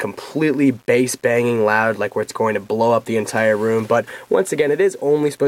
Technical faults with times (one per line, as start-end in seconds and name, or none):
0.00-5.47 low bit depth without dither